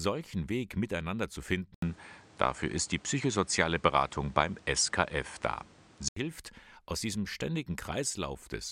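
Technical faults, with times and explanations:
1.74–6.16 s, input switched to a poorer device: after "miteinander zu" the speech turns duller, with an 80 ms gap, a level shift of around 5 dB and new background noise roughly 30 dB down, until "hilft aus diesem". The likely cause is a change to another microphone. A spectrogram shows nothing above 10.3 kHz here, and the waveform shows a brief flat gap at the switch.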